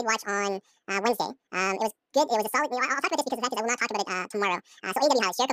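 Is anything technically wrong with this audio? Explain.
Yes. The whole speech clip has audio read two samples at a time, so it plays at double speed. The reader treats each pair of samples as one frame, as if the data were stereo or wider samples, which pushes the pitch up a full octave, 12 semitones.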